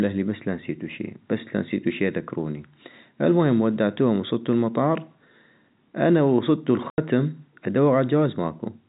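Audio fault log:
6.90–6.98 s, packet loss filled with silence: an 80 ms dead gap with abrupt edges, which fits four lost 20 ms packets rather than a smoothed or faded dropout.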